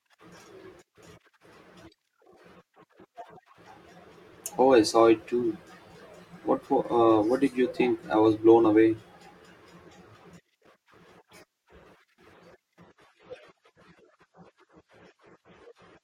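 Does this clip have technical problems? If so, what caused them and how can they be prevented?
Yes. From 12.83 s to the end of the speech clip at 16.04 s, the audio switches abruptly to an adaptive stream at a lower bitrate. There is no gap, but coding artefacts become more audible, consistent with the player dropping from a 96 kbit/s AAC-LC rendition to a 32 kbit/s one when throughput fell. Preventing it requires a steadier connection, more client buffering, or a higher minimum rendition in the bitrate ladder.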